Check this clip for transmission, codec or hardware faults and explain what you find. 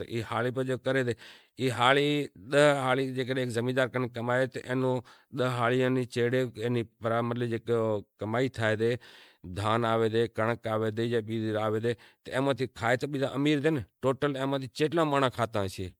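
One codec fault runs through the whole clip: generation loss, likely from around fifteen successive MP3 encodes at 128 kbit/s. Each re-quantisation on a shifted frame grid stacks noise and spectral holes, so the speech sounds swirly, hollow and smeared with blurred attacks. A spectrogram shows flickering gaps and a hard ceiling near 19.9 kHz.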